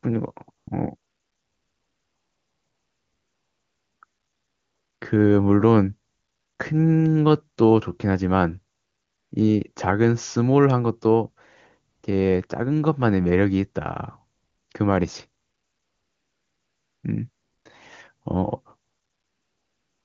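AMR comfort noise appears in this speech clip twelve times between 0.57 and 20.04 s, in gaps from 20 ms up to about 3 s (longest 0.97 to 4.01 s). The phone judged the talker silent and stopped sending speech frames, so the receiver substituted smooth synthetic noise that switches in and out, replacing the real background.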